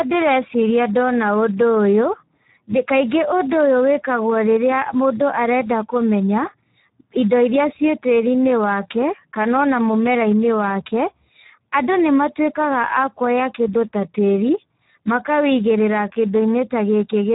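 From start to end, the speech carries heavy Speex codec damage. The CELP coder has too few bits to describe the excitation, so the voicing turns hoarse and grainy, with a noisy, buzzy edge that drifts toward a robotic quality. The damage is consistent with a low bitrate of around 8 kbps. The band stops at about 3.8 kHz, with no fill above it, so the audio sounds narrow and muffled like a telephone.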